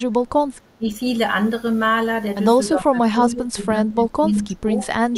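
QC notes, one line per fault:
0.78–0.89 s, 2.72–4.22 s, 4.44–4.70 s and 5.11–5.17 s, speech suppressed in double talk: the speech dips sharply, by about 15 dB at its deepest and nearer 10 dB in the 4.44 s stretch. The longest loss spans roughly a second inside the 2.72 s run. This is likely an echo canceller hearing both ends at once, mistaking the near talker for loudspeaker echo, and ducking everything.
4.36–4.40 s, echo leak: a faint copy of the speech returns 295 ms late, about 30 dB below the direct sound. A short scrap slips past the far end's canceller. This is most likely a loudspeaker-to-microphone path the canceller failed to fully cancel, so the leftover is sent back delayed.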